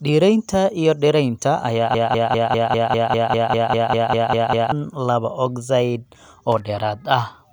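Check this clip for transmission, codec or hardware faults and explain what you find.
Two faults can be heard in the speech: a stuck repeat that points to a stalled playback or streaming path, and a short burst of contact noise from the hardware side.

Broken-record loop, 1.95 to 4.72 s. The stall is likely in the player, encoder or stream. Instead of moving forward, it kept resending the last fragment it held, a piece about 199 ms long, 14 times in a row. The result is a rapid, stuttering repetition of one tiny slice of speech for nearly three seconds. Whatever was said during that stretch never arrives.

Loose connector crackle, 6.52 to 6.60 s. A worn or dirty contact in the signal chain briefly made and broke connection as it shifted. This chopped the signal on and off. It sounds like a quick, ragged scratch of crackle lasting under a tenth of a second.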